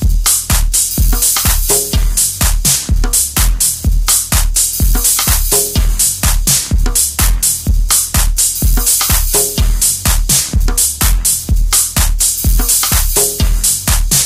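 Hard clipping runs throughout this recording of sounds: the level is driven about 8 dB past full scale, so roughly a tenth of samples are flattened, giving harsh fuzz on loud moments.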